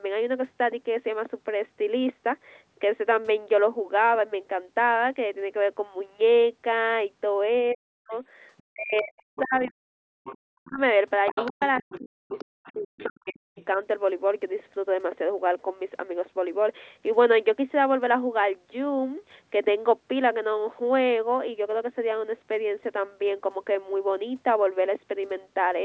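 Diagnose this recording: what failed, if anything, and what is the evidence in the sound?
The speech dips and breaks up in two stretches, from 7.72 to 8.12 s and from 8.66 to 13.59 s, with the deepest drops around 40 dB and a few seconds of audio swallowed in all. This is speech suppressed in double talk, at the call-processing stage. The likely cause is that a second talker was active at the same moment, and the echo canceller could not tell the local voice from the loudspeaker echo, so it attenuated both.

A second voice leaks in underneath from 8.11 to 8.63 s, 9.18 to 9.71 s, 10.24 to 10.38 s, and 11.26 to 13.65 s. It starts faint, roughly 35 dB below the speech, and rises to roughly 15 dB below by the last two stretches. This is the other side's voice leaking through, again in call processing. The device is likely playing the far end on a loudspeaker, and the echo canceller is leaving part of it in the microphone signal. 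This leak overlaps the suppressed stretches, within a band that stops at 8 kHz.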